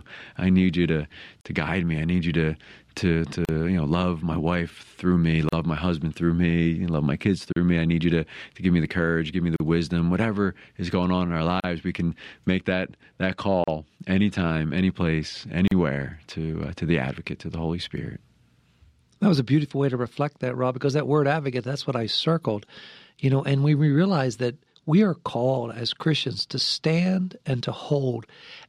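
It's a speech clip with a gap at a join of encoded pieces every 2 s, at 1.41, 3.45, 5.49, 7.53, 9.56, 11.6, 13.64 and 15.68 s. The first comes right after "i need you to". Each is a silence with smeared edges of about 38 to 40 ms from separately encoded chunks spliced untrimmed, leaving encoder delay and last-frame padding in.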